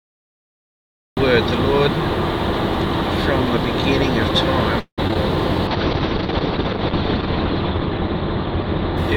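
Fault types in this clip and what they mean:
Cut-off start: The audio opens in digital silence and only comes in at 1.17 s, already mid-sound, with no attack or fade-in. The capture or stream evidently began late, so the true onset of the sound is missing.
Repeated packet loss (robotic sound): From 4.79 to 5.17 s, four gaps break the audio, the longest 182 ms. Each is filled by stretching the preceding sound, so over half of this short stretch is concealment, giving a choppy texture with small pieces lost.
Call bitrate drop: From 5.68 s to the end, the encoder's rate falls from 96 to 7 kbps, staying at its lowest for about 1.8 s. Coarser coding makes the sound rough and watery, and the bandwidth narrows from 20 kHz to 6 kHz, dulling the top end.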